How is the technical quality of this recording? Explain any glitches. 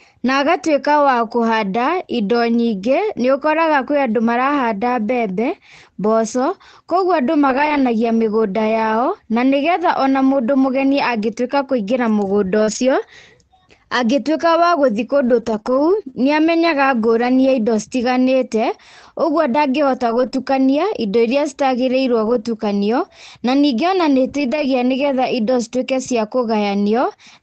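The speech has several packet-loss glitches. Through the Opus call path, the sound is band-limited to about 8 kHz, with the coding noise you would expect at around 24 kbps.

Lost packet rebuilt from error correction, at 7.49–7.79 s, 20.06–20.28 s, 20.34–20.36 s, 22.26–22.36 s and 24.28–24.66 s: the decoder played low-bitrate backup copies, so these stretches sound rougher and noisier. A spectrogram shows smeared, grainier energy there, but no gap.

Scattered short gaps, between 12.63 and 16.14 s: about four brief holes, the longest around 40 ms, were patched by continuing the preceding sound. They are heard as ticks or hiccups and show as thin smeared slivers in the spectrogram.

Short concealed packet loss, at 20.30–20.34 s: about 20 ms was extrapolated from the last sound and blended back in. It gives a brief smear, visible as a short, overly smooth patch in the waveform.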